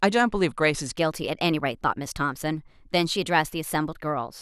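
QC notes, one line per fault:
0.97–4.41 s, section at the wrong speed: speech suddenly runs hurried and higher, about two semitones up at 1.13x speed, likely from playback against a mismatched clock.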